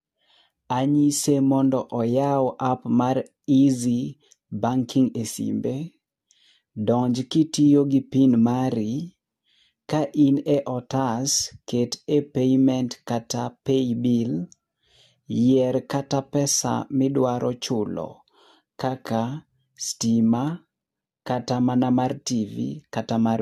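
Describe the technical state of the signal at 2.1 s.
Generation loss runs through the clip, including 2.1 s, likely from roughly four successive AAC-LC encodes at about 64 kbit/s. Each pass requantised on a shifted frame grid, piling up swirly, hollow smearing and blurred attacks, with nothing above 14 kHz.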